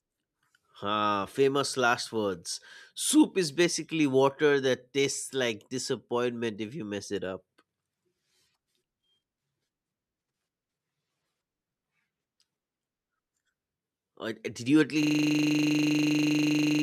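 A system hang loop begins at 15.03 s, right after "you at", and runs to the end of the clip. The audio path froze while the sound hardware kept replaying its ring buffer, so one 40 ms slice of speech repeats exactly, about 45 times over the final 1.8 s. At a loop rate of 25 Hz, this stuck fragment comes across as a rough, mechanical buzz instead of continuing speech.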